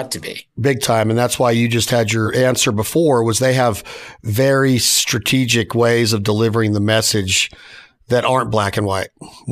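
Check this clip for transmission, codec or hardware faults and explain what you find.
Listening through the recording, nothing stood out that would point to a problem in how it was carried, encoded or captured.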